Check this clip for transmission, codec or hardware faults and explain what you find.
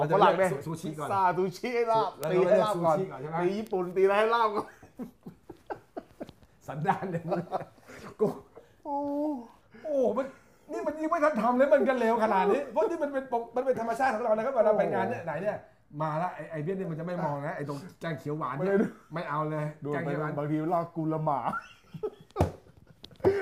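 Two bit error spikes appear, at 2.24 s and 3.67 s. In each, a single flipped bit in one sample jumps its value, giving a sharp broadband tick, about -7 dBFS and -19 dBFS respectively.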